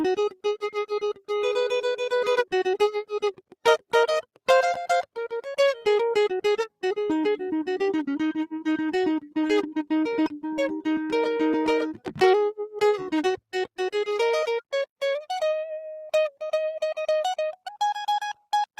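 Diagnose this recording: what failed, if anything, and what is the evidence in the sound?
Call processing failed: the noise suppressor mistook parts of the music for noise, cutting sound at 1.14–1.3 s and 3.33–3.93 s by up to about 18 dB. Sustained tones dip, and decays end early. A spectrogram shows sudden darker gaps in held partials, and the waveform envelope visibly sags there.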